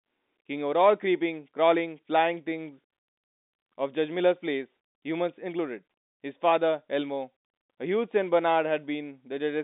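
No technical faults detected.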